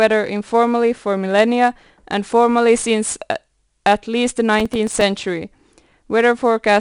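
The speech has been coded throughout with 4-bit ADPCM compression. Each sample is stored as a coarse step from a predicted value, and the step size must keep adapting. The rounding error becomes hiss that rises and falls with the speech, so every loud syllable carries a plainly audible grit and sharp onsets smear. The audio stops near 10.6 kHz, and the roughly 89 kbps stream suggests a sample rate around 22 kHz.

From 4.60 to 5.01 s, processor overload crackle sets in. The processor falls behind and misses many deadlines in a row, each for a buffer of only a few milliseconds, with about fifteen failing in quick succession. Every missed buffer is left silent, cutting a tiny hard-edged hole into the speech. Packed together, these holes make a rapid burst of crackling that tears at the sound for about 0.4 s, then stops.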